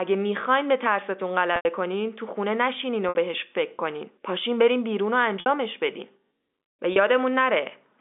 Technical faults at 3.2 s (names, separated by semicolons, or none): packet loss with pitch repetition